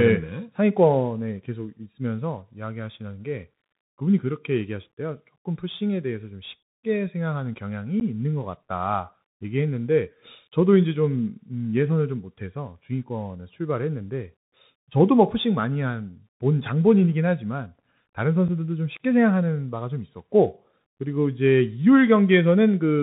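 Throughout the speech, the link runs through a Bluetooth CVSD headset codec that encodes one bit per sample, up or down, with an adaptive step, which fits a 64 kbps CVSD link. Nothing passes above 4 kHz, s sounds turn scratchy, loud bright moments distort, and a granular hiss sits underneath.

From 8.00 to 8.02 s and again at 18.48 s, unconcealed Bluetooth headset packet loss drops a few voice packets between headset and phone, about 11.2 ms and then 7.5 ms. Silence or an idle pattern fills each gap, so the speech has abrupt holes and returns briefly quieter.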